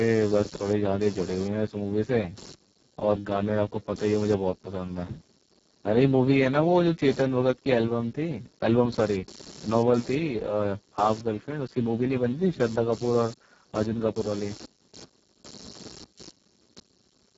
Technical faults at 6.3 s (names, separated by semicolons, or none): computer activity noise; Speex codec